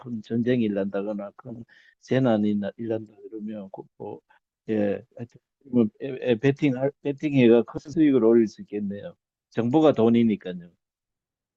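Around 1.49 to 1.64 s, and again from 7.77 to 7.99 s, you get frames out of order. Two neighbouring runs got swapped, 60 ms and 80 ms blocks respectively, so each stretch of speech plays with its halves flipped. It comes across as a garbled flutter, but no time is lost.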